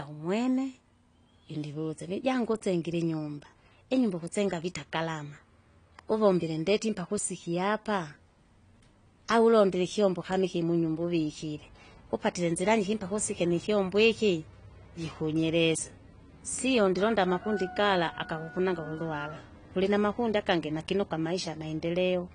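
Speech throughout, dull and smeared, with plainly audible coding damage. Nothing sounds above 10 kHz. The likely cause is AAC compression at around 32 kbps.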